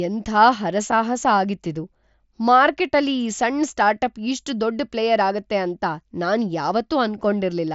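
There are no technical faults to describe in this speech recording, which comes over a Bluetooth mSBC headset link with nothing above about 7.7 kHz.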